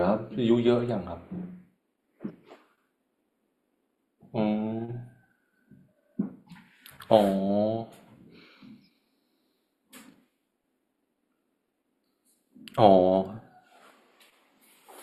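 Throughout the speech, one channel runs late by only a few samples, under a tenth of a millisecond, before the two are summed to mono. This channel delay causes comb filtering, with the first notch near 7 kHz, so the upper treble sounds thinned and phasey.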